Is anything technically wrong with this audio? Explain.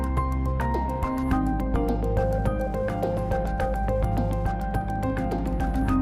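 Yes. Throughout, Wi-Fi interference: a nearby radio's beacon, every 102.4 ms, is rectified by the audio circuit, giving faint steady ticking about ten times a second, roughly 45 dB below the signal.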